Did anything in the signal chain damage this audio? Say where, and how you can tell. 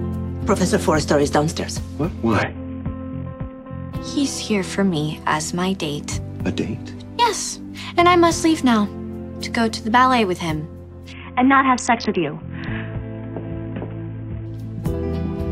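Yes. There is a Bluetooth SBC bit pool drop at the codec stage. From 2.42 to 3.92 s and 11.12 to 14.46 s, treble dulls and gritty noise rises. That fits a bit pool cut from 31 to 5.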